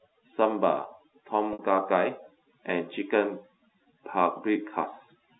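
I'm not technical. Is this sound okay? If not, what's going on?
No. All the way through, there is overdone noise removal: a cleanup tool set too strong wipes out the background and parts of the speech with it. It leaves near silence with twinkling specks, which sets it apart from ordinary muffling.

At 1.53 s, about 60 ms of sound was lost in transit, and you hear packet loss with pitch repetition. The phone system filled the gap by repeating the last bit of voice, so it sounds like a buzzy hold that fades into silence before the voice comes back. The telephone-line sound itself comes from the normal phone format, not from either problem.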